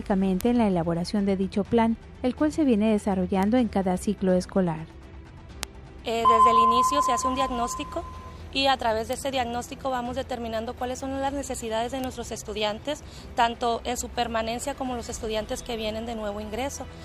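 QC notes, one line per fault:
0.41, 3.43, 5.63, 9.13, 12.04 s: bit error spike, five isolated sharp broadband ticks unrelated to the surrounding sound, peaking about -3, -15, -3, -9 and -9 dBFS. Each is a flipped bit in one to three samples that leaps by a power of two and returns instantly.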